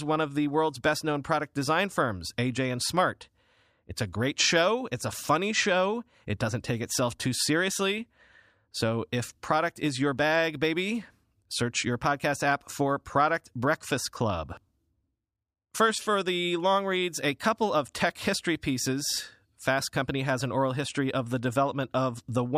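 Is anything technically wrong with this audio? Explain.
No, nothing in this speech recording stands out as a technical problem; the signal stays steady and intact throughout.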